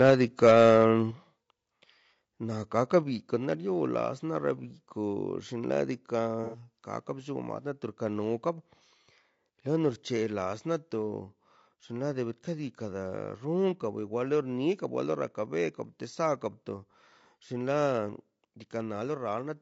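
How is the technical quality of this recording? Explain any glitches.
The technical quality is poor, with several distinct faults.

Throughout, the speech is likely passed through low-delay AAC compression at about 32 kbps. Its short frames resolve harmonics poorly, leaving the voice plainly rough and grainy.

Microphone overload, likely from input gain set too high, clips the peaks at 0.0–0.13 s, 0.43–0.77 s and 2.95–2.97 s, by up to about 5 dB, giving loud syllables a harsh crackle.

The microphone volume is stepped down at 0.1 s, 1.11 s and 3.03 s, likely by call software reacting to clipping. The level drops suddenly, by about 3, 6 and 2 dB.

AAC frame loss with concealment at 6.44–6.59 s leaves the decoder to fill a 90 ms gap, which fits about three lost frames, from the last good spectrum. That patch sounds smeared and noisy.

From 13.17 to 14.17 s, a channel delay of roughly one sample is summed to mono. 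This comb filtering cancels high frequencies near 20 kHz, dulling the sound slightly.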